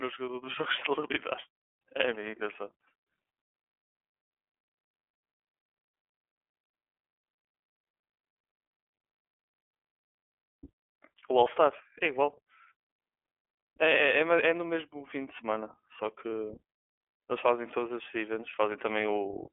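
Throughout, the speech carries plainly audible iLBC codec damage: independently coded 30 ms frames sound rough and synthetic, and a spectrogram shows nothing above 3.6 kHz.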